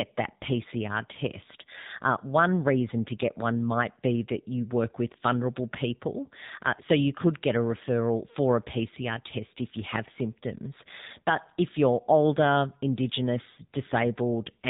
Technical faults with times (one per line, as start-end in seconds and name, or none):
0.00-14.70 AMR narrowband mobile codec